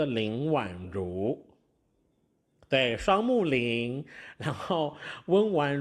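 A speech recording with no technical faults to point to. Nothing in it calls for a time, a cause or a fix.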